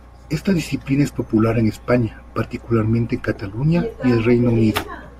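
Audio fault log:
No fault can be heard anywhere in this speech clip.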